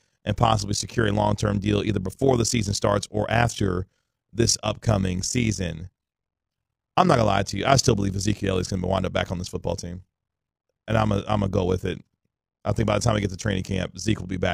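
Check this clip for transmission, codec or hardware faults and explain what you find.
One fault runs through the whole speech clip: overlap-add ripple. The level pulses steadily, around 40 times a second, with a swing of about 11 dB. The audio was split into windowed frames and rebuilt with an overlap whose windows don't add up to a constant gain, so each frame boundary brings a dip and swell. It sounds like a fast, rough tremolo over the voice. On a waveform the envelope shows regular scalloping. A spectrogram shows vertical banding at that rate across all frequencies.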